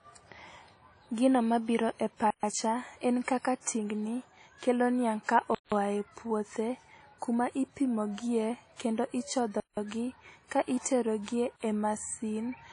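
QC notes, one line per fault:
Throughout, WMA compression: a low-bitrate transform encoder is the likely cause. Its quantisation noise smears across long blocks, giving plainly audible ringing, washy hiss and nothing above 10.1 kHz.
2.30–2.43 s, 5.55–5.72 s, 9.60–9.77 s, 11.56–11.61 s, block of digital silence: blocks of zeros from an unfilled buffer or invalid calculation cut the speech out and back with no fade, leaving 43 to 171 ms holes. The 171 ms gaps fit 8192-sample blocks.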